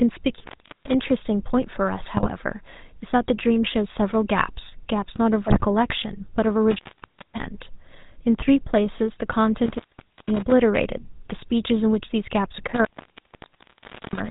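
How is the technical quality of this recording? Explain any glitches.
The recording is plainly coloured by the phone codec throughout, with two short bursts of damage.

Across the whole clip the speech has a buzzy, gravelly roughness and no content above 4 kHz, the signature of the GSM full-rate codec. It rebuilds the voice from a vocal-tract model driven by coarse, regularly spaced pulses, which fits its 13 kbps rate.

At 2.16 to 2.31 s and again at 5.47 to 5.65 s the voice breaks into squawks and gargling. These are GSM bit errors: corrupted filter, pitch or gain values distort each affected frame. The second, longer burst has the higher error rate.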